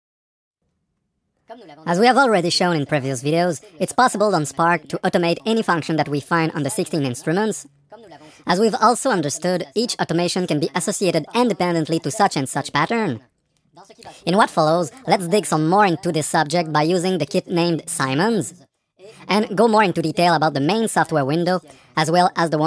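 The audio plays back with a wrong sample rate for its whole length. Everything runs about 1.38 times too fast and sits roughly 5.6 semitones too high, and because speed and pitch are raised by the same ratio, the sound comes across as hurried and shrill rather than merely sped up. That ratio fits samples captured at 16 kHz being clocked out at 22 kHz with no rate conversion in between.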